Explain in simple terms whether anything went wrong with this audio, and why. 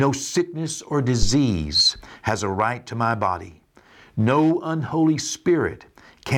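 A phantom power thump hits the speech at about 1.23 seconds, right after "sickness or", and lasts until about 1.35 seconds. It is a deep, dull knock, like something bumping the microphone. It fades fast, in roughly 30 milliseconds. The cause is power to the microphone being switched on or off while it was recording. That sudden electrical jump leaks through the input's parts and comes out as a low thud.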